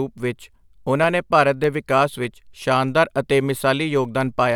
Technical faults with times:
0.44-4.55 clock drift buffer slips

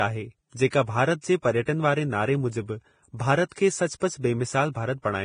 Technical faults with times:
0.00-5.24 Vorbis compression
0.70-0.72 pre-echo
1.21-1.24 pre-echo
3.49-3.52 pre-echo
4.00 pre-echo

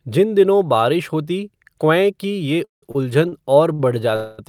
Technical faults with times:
2.64-2.83 call audio freeze
2.91-2.96 short stall from a late packet
3.29-3.33 short stall from a late packet
3.73-3.80 short stall from a late packet
4.16-4.39 call audio freeze

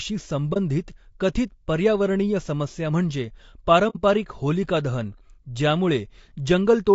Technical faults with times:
0.00-6.94 low-delay AAC compression
0.53-0.57 AAC frame loss with muting
3.89-3.97 AAC frame loss with muting

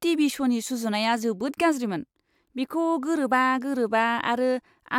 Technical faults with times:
none

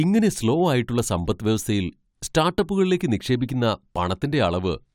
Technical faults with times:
none

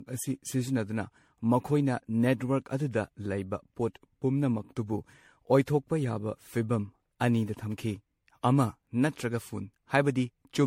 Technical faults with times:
0.00-10.67 generation loss

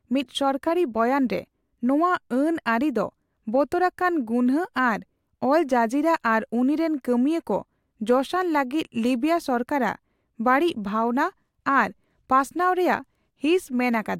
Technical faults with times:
none

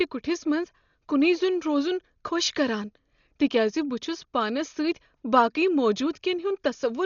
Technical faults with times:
0.00-7.05 Dolby Digital compression

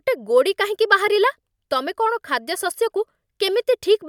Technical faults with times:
none

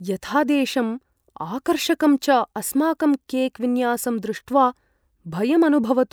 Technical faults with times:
none

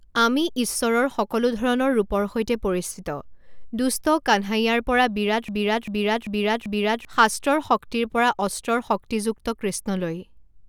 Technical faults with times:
5.48-7.05 broken-record loop

